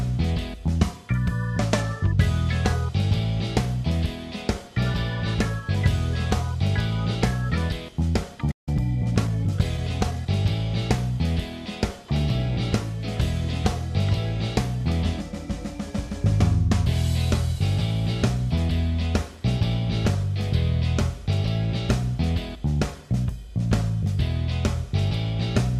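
At 8.51 s the sound cuts out mid-flow and stays silent until 8.69 s, a playback stall of about 158 ms, likely caused by the player running short of buffered data or its thread being blocked. On a waveform it shows as a flat line, and on a spectrogram as a blank vertical band across all frequencies.

From 8.69 s to 10.27 s a time-compressed catch-up follows. The player trims its backlog by removing small slices and cross-fading the joins, so the audio runs at 1.1x speed while keeping its pitch. A spectrogram shows events packed slightly closer together, and the harmonics stay level with no upward shift.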